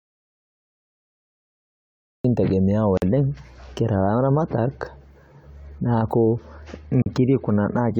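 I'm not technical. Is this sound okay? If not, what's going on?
No. Audio dropout to silence runs from the very start to 2.25 s: the clip opens in total dead silence, with no background hiss at all. Most likely the microphone or link was cut off while the recorder kept writing nothing, so that speech is lost.

A gap at a join of encoded pieces appears at 2.97 s (about 47 ms) and at 7.02 s (about 40 ms), four seconds apart. The audio was saved in separate chunks and stuck together, leaving brief blips of silence before the speech carries on.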